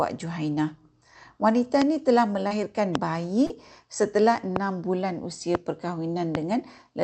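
Speech carried over a call path whose Opus coding, which fits about 64 kbps, limits the top end to about 8 kHz, with two kinds of fault. There are five loud pops, each a single sharp pulse: 1.82–1.84 s (just before "ini telah"), 2.95–2.97 s, 4.56–4.58 s (just before "bulan usia"), 5.55–5.57 s (just after "bulan usia") and 6.35–6.37 s. They stand roughly 20 dB above the speech, the last one around 15 dB, while the speech continues underneath. The likely cause is a sudden voltage step from a plug, a switch, static or a driver glitch, shaped into a pop by the circuitry that follows. There are also two short concealed packet losses, at 2.47–2.53 s and 3.46–3.53 s. In each, about 40 ms of audio failed to arrive in time. The receiver extended the preceding sound for about 30 ms, then blended back into the real signal, leaving a brief smear or wobble where a short sound may be lost.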